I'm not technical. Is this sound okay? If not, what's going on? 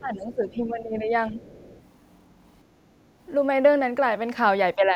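No. There are three problems, all tied to the part of a call system that cancels echo.

The first is speech suppressed in double talk. From the start to 1.12 s, the voice sinks noticeably quieter in places. It happens again briefly from 1.29 to 1.4 s, and from 4.75 s to the very end. This is likely because both people spoke at once. The echo canceller could not tell the talker from the loudspeaker, so it turned everything down.

The second is the other side's voice leaking through. A second voice can be heard faintly from 0.23 to 0.34 s, and again from 1.37 to 1.82 s. It is very quiet, well below the main voice. It likely comes from the talker's own loudspeaker. The microphone picked it up, and the canceller did not remove it all.

The third is background gated by the echo canceller. From 2.75 to 2.99 s, the room sound behind the voice dips clearly. It drops for about a fifth of a second, then comes back. 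The canceller clamped down on the microphone while the loudspeaker was playing, then let go.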